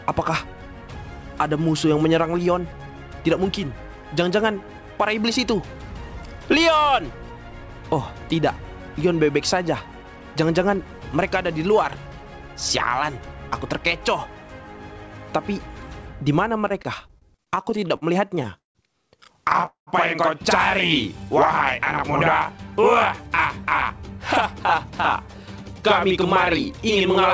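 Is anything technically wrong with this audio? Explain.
Yes, two related problems show up late in the clip, both on a call path whose audio stops at 8 kHz.

From 16.61 to 18.78 s there's repeated stalls (stutter): a couple of dozen short hitches, the longest about 166 ms, filling roughly a quarter of that stretch. Packets kept arriving late, so the receiver stretched the last sound each time. Nothing's lost, but it drags and stammers.

Then from 19.66 to 19.90 s comes a call audio freeze: the sound holds and fades, with about 120 ms of near-silence, adding roughly 212 ms of delay before it resumes where it left off. The likely cause is packets held up in transit, briefly draining the jitter buffer.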